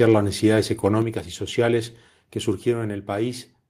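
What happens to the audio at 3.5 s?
Nothing goes wrong at 3.5 s; the audio runs on intact through that moment with no dropout, click or distortion.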